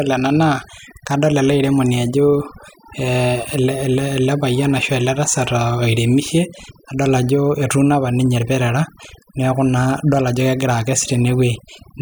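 Overdone noise removal runs through the whole clip. The noise reduction was set so aggressively that individual frequency bands near the tool's noise estimate are pulled down hard or switched off, and the softer parts of the speech are removed along with the noise. Pauses drop to near silence dotted with small twinkling specks. Unlike a low-bitrate codec's swirl, this damage follows the noise floor and hits quiet moments hardest.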